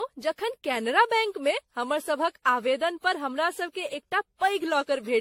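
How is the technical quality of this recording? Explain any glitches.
The technical quality is poor. Generation loss runs through the whole recording. The speech has a swirly, hollow, smeared character, with consonant onsets blurred. That is more damage than one lossy pass at a modest rate would leave, and it sounds like audio that was likely re-encoded around seven times with a codec resembling AAC-LC at about 64 kbit/s. Each pass requantises on a shifted frame grid, so noise and gaps compound. A spectrogram would show nothing above 16.6 kHz, patchy holes and smeared transients. The waveform would show softened attacks.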